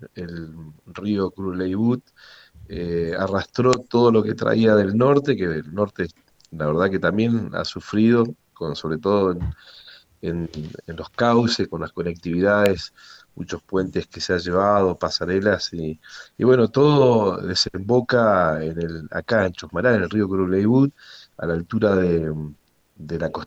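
At 12.66 s, a nearby switch or motor likely arced onto the line, an electrical switching spike heard as one sharp, loud snap.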